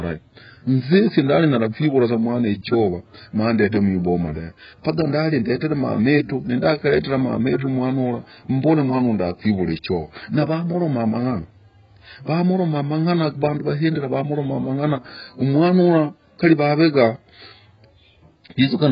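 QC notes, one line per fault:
Throughout, AAC compression: a very low-bitrate AAC-LC encode, likely near 12 kbps, removes everything above 5.1 kHz, leaving speech dull and smeared, with warbling, fizzy sibilants.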